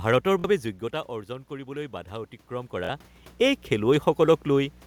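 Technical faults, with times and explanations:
Throughout: mains hum. A steady low tone at 60 Hz sits under the speech, roughly 25 dB below it, with some low harmonics. It most plausibly comes from a ground loop or nearby transformer feeding the power line into the signal. Unlike the room noise also present, the hum is a single fixed pitch that never changes with the talker or the room.
0.40–0.44 s and 2.85–2.89 s: Bluetooth stutter. Each event spans about 46 ms, which fits two late or lost packets. The receiver filled each gap by replaying its last short slice of audio, so you hear a brief buzzy repeat rather than silence. The first comes just before "বাবে যোগ্যতা". After each stutter the speech resumes further along, as though it had kept playing, which is what sets it apart from a simple dropout or a pause in speaking.
1.07–3.7 s: automatic gain rising. The input level fell by about 12 dB, and the gain control responded by slowly lifting its gain about 4 dB over more than two seconds, starting after "বাবে যোগ্যতা". 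Speech and background swell together at the same rate. That shared, gradual rise is what distinguishes it from the talker's own movements near 0.5 s and 2.5 s, which change only the voice.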